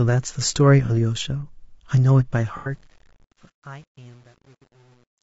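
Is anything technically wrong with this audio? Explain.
Yes. Three kinds of fault can be heard in this speech clip.

Low-delay AAC compression runs through the whole clip. The voice sounds rough and grainy, with noise between the harmonics and a dulled, synthetic top band. This is likely the low-delay AAC used in video calls. Its short frames resolve pitch harmonics poorly. The damage fits a low bitrate of around 32 kbps.

AAC frame loss with concealment occurs at 0.86 to 0.90 s and again at 2.57 to 2.71 s. Each gap sounds like a smeared, noisy, phasey patch. The decoder filled in from the last good spectrum. The first gap points to one lost frame, about 30 ms long. The second points to three lost frames, about 90 ms long.

Truncation distortion on a fade starts at 2.32 s and lasts to the end. The clip fades out, but the fade keeps too few bits and adds no dither. That fits a stage holding around 9 bits. 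As the level drops, the waveform collapses into coarse steps. From 2.98 s onward the tail turns gritty.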